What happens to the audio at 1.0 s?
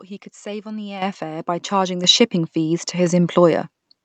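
At 1.02 s the microphone volume is stepped up: the call software judges the input too quiet and raises the device's input gain by about 10 dB in a single jump. Voice and background noise get louder together. On the waveform the envelope steps abruptly to a larger amplitude. On the spectrogram every frequency band brightens at once along a sharp vertical edge, up to the 8 kHz ceiling of the Opus call path.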